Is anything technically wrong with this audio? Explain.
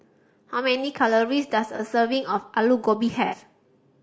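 Yes. Throughout the speech there is plainly audible coding damage: a rough, grainy texture, noise between the harmonics and a dull, synthetic top band. The likely cause is low-delay AAC compression such as AAC-ELD, whose short frames resolve pitch poorly; the grain fits roughly 32 kbps.

AAC frame loss with concealment occurs at 1.76–1.80 s and 3.26–3.35 s. Missing frames were rebuilt by the decoder from the last good spectrum, leaving brief smeared, noisy patches. The first fits one lost frame, about 30 ms; the longer second fits two, about 60 ms.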